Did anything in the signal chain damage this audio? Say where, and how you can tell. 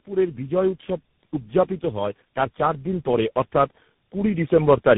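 Yes. At the codec stage, the sound has been through tandem speech coding. It sounds like three speech codecs decoded and re-encoded in series, with a CVSD-type coder last, each working on the previous one's damage. Throughout, nothing survives above 3.8 kHz, and the speech is rough, muffled and warbly.

At the call-processing stage, automatic gain rising is audible. The gain control judged the input too quiet and slowly turned it up. Speech and background swell together from 1.79 to 3.41 s by about 5 dB, and again from 4.11 to 4.91 s by about 4 dB.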